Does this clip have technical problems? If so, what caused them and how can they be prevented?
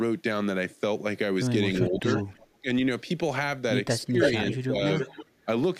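Yes. A faint-to-loud delayed copy of the speech, trailing by about 330 ms, appears at 1.75–2.24, 4.02–4.29, 4.53–4.57 and 4.99–5.45 s. This is an echo leak, likely from a far-end loudspeaker whose echo canceller let its pickup back into the call. Using a headset or a properly tuned echo canceller prevents it.

The speech dips, by roughly 10 dB up to about 30 dB, at 1.9–2.06, 2.25–2.68, 4.07–4.33 and 4.55–4.78 s. This is speech suppressed in double talk: the canceller, likely confused by simultaneous talking, turned down both its own talker and the echo. A canceller with better double-talk detection prevents this.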